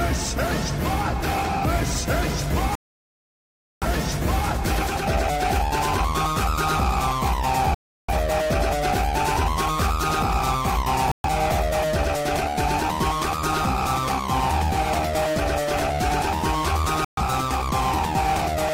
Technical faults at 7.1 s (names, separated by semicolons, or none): none